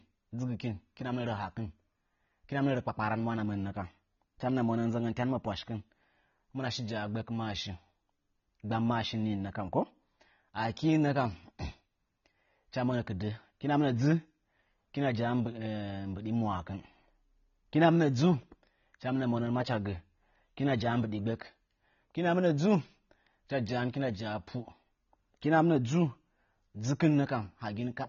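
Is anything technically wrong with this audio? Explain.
Yes. Throughout, the speech has plainly audible damage, likely from AAC compression at a low bitrate, which fits about 24 kbps. The encoder's cut-off removes everything above 6.9 kHz, leaving a flat ceiling on a spectrogram. Quantisation of the remaining bands dulls the sound and gives sibilants a smeared, fizzy texture.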